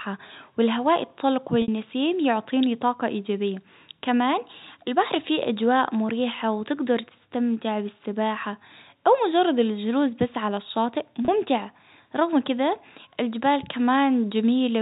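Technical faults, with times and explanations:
1.62 to 1.68 s and 11.25 s: packet loss with pitch repetition. About 60 ms goes missing at 1.62 s, which fits two lost packets, and about 30 ms at 11.25 s, which fits one. The receiver fills each gap by repeating the last pitch period, so the sound briefly holds with a buzzy, frozen tone before fading, and the longer 60 ms gap fades into silence. The 30 ms gap is short enough that the fade toward silence never completes. That held buzz distinguishes this from a plain dropout or a click. The G.711 telephone coding keeps the sound inside the 4 kHz telephone band.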